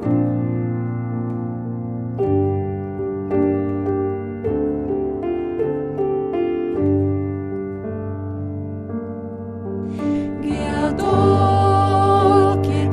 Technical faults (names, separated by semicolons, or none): none